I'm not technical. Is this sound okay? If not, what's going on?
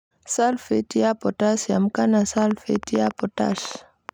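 No. A train of clicks runs from 2.38 s to 4.1 s, just after "ya potassium kana": about fifteen similar pops at roughly 7.6 per second, unevenly spaced. This is likely interference from nearby equipment or a faulty connection or power supply injecting sharp pulses over the speech.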